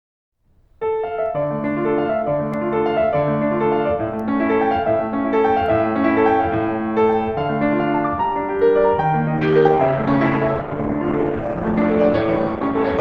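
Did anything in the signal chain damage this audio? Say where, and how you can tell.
Yes. A block of digital silence at 2.54 s points to the driver or buffer stage. The music drops to zero for about 2.7 ms and returns with no fade, so it is heard as a tick. The length fits a 128-sample buffer left unfilled in time.

From 9.37 s to the end, an adaptive stream at a lower bitrate takes over at the network and codec stage. Quality falls suddenly with no gap: the top above 17.5 kHz is gone, and artefacts rise, consistent with Opus dropping from around 64 to 12 kbit/s.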